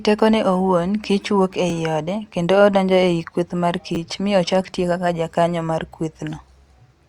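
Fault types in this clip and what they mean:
Repeated buffer: New audio arrived late, so the same short slice played again instead of fresh sound. Here one slice sounds three times in a row, from 3.95 to 3.97 s, just after "kweth mar" and before "mi ochak tiyo kaka". Each repeat joins with a hard edge. The slices are so short that the result is a brief buzz, not a clear stutter. The length fits a 10 ms buffer. Almost nothing seems missing afterwards.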